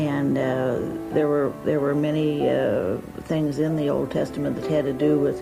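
At 3.0 s the call's bandwidth estimate collapses and the encoder is pushed onto a much smaller bit budget, a call bitrate drop that fits a fall from roughly 96 kbps to about 28 kbps. With fewer bits, the codec quantises more coarsely and trims the upper frequencies, so the sound turns muffled and watery. The rate sits at its lowest for about 1.9 s and does not recover before the end.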